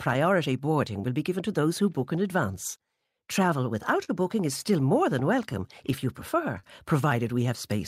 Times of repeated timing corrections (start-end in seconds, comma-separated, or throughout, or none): 0.37-7.81